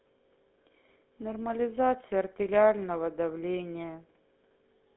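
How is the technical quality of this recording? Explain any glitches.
The recording has one fault, present from start to finish: the speech has passed through the GSM full-rate codec, and the damage is plainly audible. The call microphone processing's high-pass filter behaves as expected.

GSM full-rate codec (throughout): The coder models the vocal tract as a filter and excites it with a regular pulse train, keeping only a sparse subset of excitation samples. That coarse excitation gives the speech a buzzy, gravelly roughness, which fits a 13 kbps full-rate coder. The line band runs from 200 Hz to 3.5 kHz. A spectrogram shows nothing above 3.8 kHz, a hard ceiling, with smeared harmonics below it.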